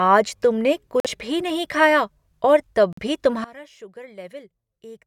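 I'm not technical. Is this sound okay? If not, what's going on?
No. Around 1.00 to 1.06 s and again 2.93 to 3.00 s, there are brief silent gaps, likely a Bluetooth dropout: audio chunks arrived too late, got discarded, then playback jumped ahead. From 3.44 s to the end, one channel is inverted, likely: one side is flipped upside down, so on a single speaker the two sides cancel and the voice nearly disappears.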